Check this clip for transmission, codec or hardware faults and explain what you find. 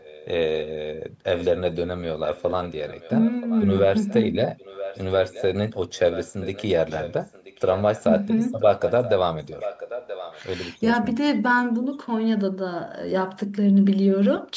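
One fault is present: echo leak. It occurs at 0.0 to 0.72 s, 1.36 to 5.43 s, 5.96 to 8.04 s and 8.59 to 10.42 s. A delayed copy of the speech returns 980 ms late. It starts faint and grows stronger, reaching about 10 dB below the speech. The likely cause is a far-end loudspeaker whose echo canceller missed part of what its microphone picked up.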